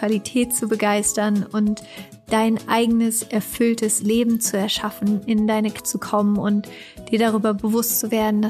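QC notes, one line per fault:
5.76–5.79 s, damaged data in a compressed stream: a brief glitch. Corrupt bytes make the decoder misread frames and resync at the next header.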